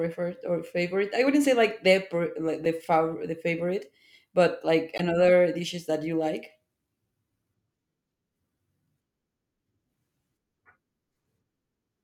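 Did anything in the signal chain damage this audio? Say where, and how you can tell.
Yes, at the codec stage. The speech has two short glitches from damaged data in a compressed stream: a brief blip at 2.65 s and a slightly longer disturbance from 4.95 to 5.00 s. Neither sounds like a wiring click or a buffer dropout. They sound like the decoder tripping over corrupted bytes in the compressed file, misreading those frames, losing sync, and then locking back on at the next valid frame header.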